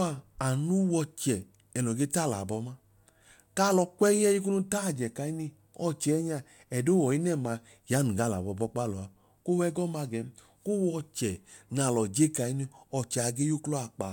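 No technical faults can be heard anywhere in the speech. There is no event here that needs a time or an explanation.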